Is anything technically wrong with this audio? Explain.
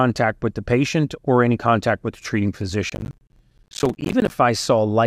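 Yes. There is processor overload crackle from 2.9 to 4.31 s. Over that stretch the processor repeatedly fails to finish its short audio buffers in time, each around 10 ms long. Every missed deadline drops a buffer's worth of speech and leaves a short gap of silence with abrupt edges. With dozens of these misses packed into less than a second and a half, the gaps merge into a gritty burst of crackle over the speech, which stops once the overload ends.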